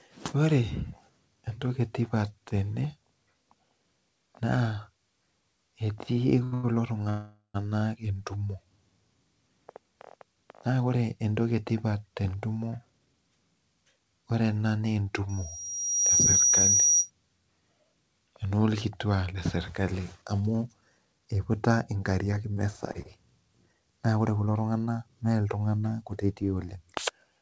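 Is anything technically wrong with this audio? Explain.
Yes, this speech has several faults typical of a call path whose jitter buffer ran empty, then caught up.

Short stalls from a late packet at 6.44 to 6.54 s and 6.54 to 6.65 s: a packet came late, so the last sound was stretched about 80 and 96 ms, showing as smeared, repeated waveform cycles with nothing missing.

A call audio freeze from 7.09 to 7.56 s, likely caused by packets held up in transit: the sound continues as a fading buzz for about 450 ms, ending in roughly 120 ms of flat silence on the waveform.

Jitter buffer speed-up from 12.55 to 13.37 s (114%), 18.90 to 21.27 s (110%) and 23.48 to 25.24 s (108%): short pitch periods were trimmed to cut delay, so the speech sounds hurried at unchanged pitch, with harmonics that stay level on a spectrogram.

Loudspeaker feedback squeal from 15.29 to 17.10 s: a microphone-loudspeaker loop builds a 5.8 kHz tone over roughly 0.7 s to about 5 dB above the speech. 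On a spectrogram it is a bright horizontal line.

Repeated packet loss (robotic sound) from 22.31 to 23.07 s: four brief losses, the longest 26 ms, are patched in quick succession, giving choppy sound and small notches in the waveform.

The G.722 call path leaves nothing above 8 kHz.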